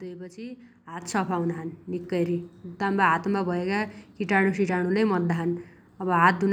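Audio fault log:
1.02 s, microphone volume stepped up: the speech and the background noise both jump in level at the same instant, by about 9 dB, and stay there. The call software judged the input too quiet and raised the device's microphone gain in a single step.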